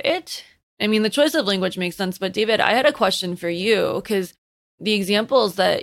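No technical faults are audible anywhere in this speech recording.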